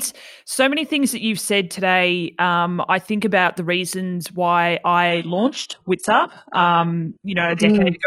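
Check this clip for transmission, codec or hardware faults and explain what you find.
One fault turns up: an adaptive stream at a lower bitrate. From 5.10 s, right after "about the reasons why", to the end, the player switched to a much lower-bitrate version of the stream after the connection slowed. The change is abrupt, with no gap. Nothing remains above 11.5 kHz, and the treble drops away with stronger codec artefacts. That fits a drop from a mid-rate AAC stream to a very low-rate HE-AAC one.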